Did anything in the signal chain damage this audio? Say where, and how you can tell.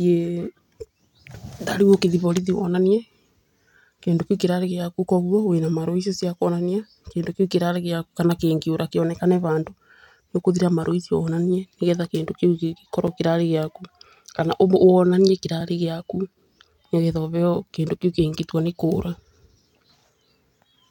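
Yes. There are two blocks of digital silence, which points to the driver or buffer stage. At 13.07 s the speech drops out for 5.8 ms, just before "kĩrarĩ gĩaku kana". At 15.61 s there is a 2.9 ms drop. Each one is a hard cut to zero and back with no fade, heard as a brief tick. The first gap fits a 256-sample buffer that was not filled in time and went out as zeros.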